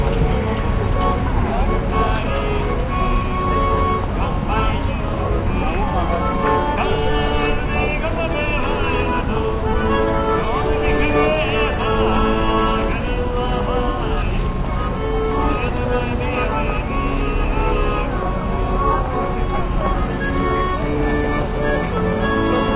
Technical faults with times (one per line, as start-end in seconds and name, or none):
none